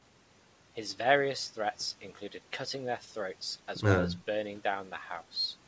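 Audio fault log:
No audio faults detected.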